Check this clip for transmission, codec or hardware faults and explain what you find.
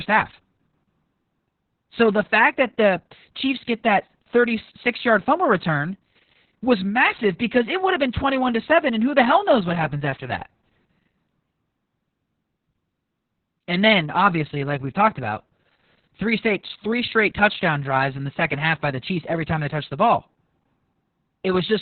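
One codec fault runs through the whole speech clip: Opus voice compression at a very low rate. Nothing is present above about 4.3 kHz, so the coder has dropped to narrowband SILK mode. That narrowing, together with heavy damage to the excitation, points to a bitrate around 6 kbps. The linear-prediction model keeps the rough vocal envelope but quantises the excitation coarsely, so the speech sounds muffled, hoarse and somewhat robotic from start to finish.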